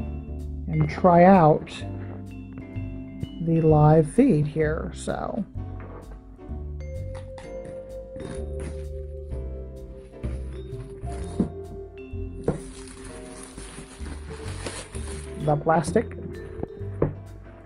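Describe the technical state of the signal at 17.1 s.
At 17.1 s the audio is intact, with no audible fault at that moment.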